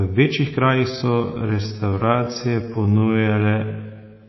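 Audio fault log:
throughout: MP3 compression. The speech carries a plainly audible watery, swirling texture, with s sounds turning metallic and chirpy and consonant onsets smeared. This points to a very low bitrate, on the order of 24 kbps. The likely cause is an MP3 encoder that was starved of bits, cutting the top band at a fixed frequency and zeroing weak frequency lines that flicker on and off from frame to frame.
0.86–4.28 s: time-stretched section. Right after "večjih krajih" the pace suddenly drops to about 0.62 times normal speed, while the pitch stays where it was, and this lasts to the end of the clip. The slowed speech drags. This is likely software lengthening the audio to fit a duration, keeping pitch by repeating short overlapping pieces of the waveform.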